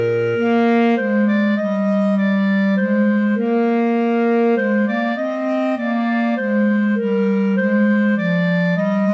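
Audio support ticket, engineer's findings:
Nothing stood out on listening; the call path's wideband character is audible, with no content above about 8 kHz, which fits a G.722 call codec.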